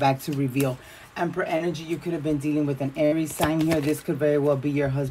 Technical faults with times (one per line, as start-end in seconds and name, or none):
1.57-1.62 short concealed packet loss
3.06-3.14 burst of packet loss